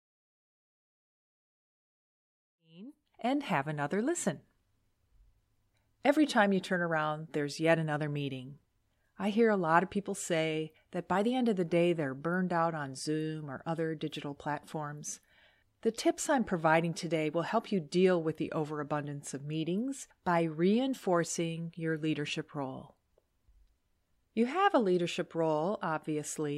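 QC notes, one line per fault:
No faults; speech fades in smoothly by 3.6 s.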